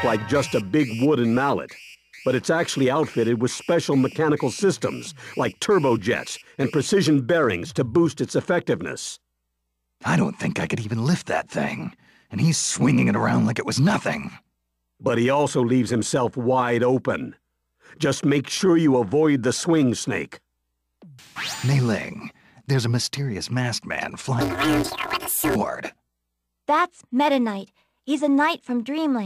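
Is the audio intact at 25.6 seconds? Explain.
No, not quite. Right around there you're at the tail of a planar-audio-read-as-interleaved fault running from about 24.41 to 25.56 s. Each block stores all the left samples and then all the right ones, but it's read back as alternating pairs. The blocks here are short, about 5.8 ms, which fits a 256-sample block. So instead of an octave jump you get a robotic buzz at roughly 172 Hz.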